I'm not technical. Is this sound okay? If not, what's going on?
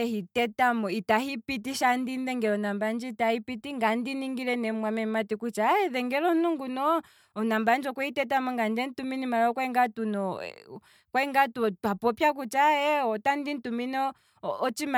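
Yes, nothing wrong can be heard in this recording.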